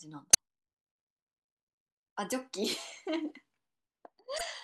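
Damaged data in a compressed stream at 0.30–0.38 s and 4.34–4.41 s: corrupted frames throw the decoder out of sync, producing brief glitches in the speech.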